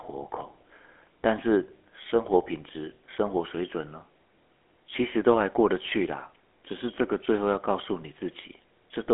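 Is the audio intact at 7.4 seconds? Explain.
No. At 7.4 s the speech carries the GSM full-rate codec damage that runs through the whole clip. This codec models the vocal tract and excites it with a regular pulse train built from a thinned-out residual. That gives the speech a plainly audible buzzy, gravelly roughness. The band is narrowed to a telephone line, roughly 250 Hz to 3.4 kHz, with nothing above 3.6 kHz. The sound points to a 13 kbps full-rate stream.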